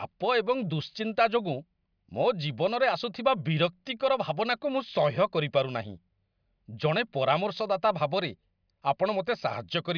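No technical faults can be heard anywhere in the speech recording.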